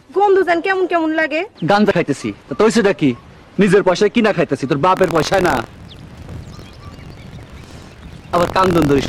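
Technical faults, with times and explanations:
4.95 s to the end, buffer tearing: a continuous robotic buzz at 43.1 Hz, consistent with a 1024-sample buffer, rides on the sound. Writer and hardware reader have slipped, so about a twentieth of each period replays audio from roughly 70 ms earlier, with hard joins.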